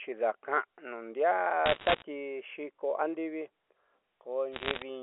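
Speech heard over a narrow telephone band that fits G.711 A-law coding. Bit errors on a digital phone line hit twice, from 1.66 to 2.02 s and from 4.53 to 4.82 s. Flipped bits corrupt single samples, giving sharp ticks and crackle over the speech. The first burst is denser, with roughly twice the error rate.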